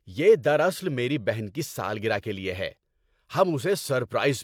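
No technical faults occur at any point in the speech.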